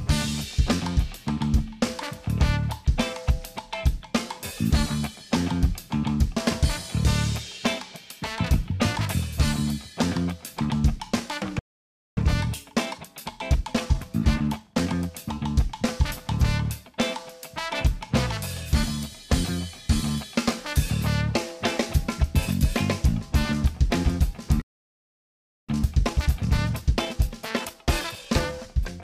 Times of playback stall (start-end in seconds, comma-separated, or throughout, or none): 11.59-12.17, 24.62-25.69